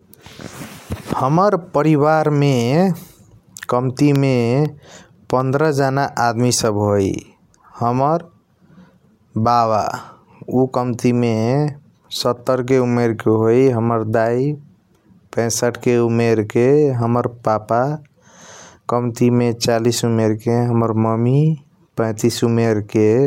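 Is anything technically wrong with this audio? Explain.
Yes. From 4.16 to 6.65 s there are periodic USB or driver dropouts: about ten short ticks spaced exactly 0.25 s apart. Each one is a tiny gap, a small fraction of a millisecond, where the speech is replaced by silence, most likely because a background task stalls the USB bus or audio driver on a fixed schedule. The abrupt cut to zero and back produces a click, audible only while speech is present.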